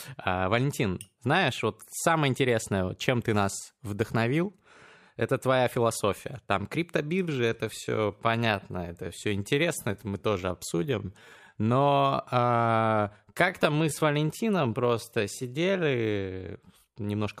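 From 7.15 s to 17.09 s the speech falls into a time-stretched section, playing at about 0.74 times its original pace while the pitch holds steady. The pace drops abruptly at the start, and through the stretch the speech drags. That points to software that was likely lengthening the audio to fit a duration by repeating short pieces rather than resampling. The slowed pace begins just before "выпивали на одной".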